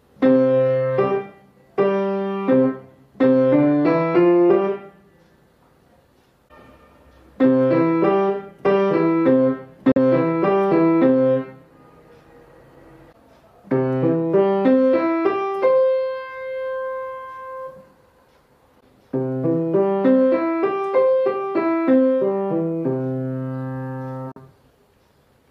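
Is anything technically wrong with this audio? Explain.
Yes. There are two short gaps in the output, at 9.92 s and 24.32 s, each about 60 ms long. They are most likely Bluetooth dropouts: audio packets reached the headphones too late and were discarded, so playback went silent until valid data arrived. The sound cuts out with hard edges or a fade of a few milliseconds and returns further along, as if it had continued during the gap. The missing span in each case fits about two lost frames.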